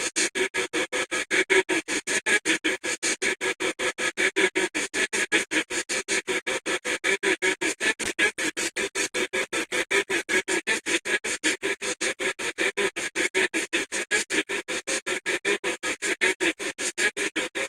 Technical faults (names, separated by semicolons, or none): call bitrate drop